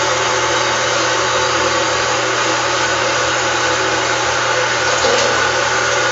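Throughout, nothing is heard above 7.6 kHz, with plainly audible watery, swirling artefacts and smeared attacks, likely MP3 compression at a low bitrate, around 48 kbps.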